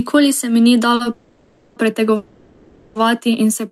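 At 0.95 to 1.01 s a short stall from a late packet holds the sound for about 40 ms, seen as a brief smeared, flattened band on the spectrogram. Call audio freezes at 1.12 to 1.78 s and 2.16 to 2.97 s stretch the last sound into a fading buzz for about 0.64 s and 0.79 s. These likely come from packets held up until the jitter buffer ran dry. They show as repeated, blurred horizontal streaks that dim without reaching flat silence before the waveform resumes where it stopped.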